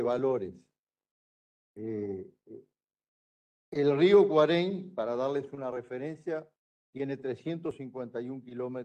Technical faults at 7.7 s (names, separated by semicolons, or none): dropped buffer (overrun)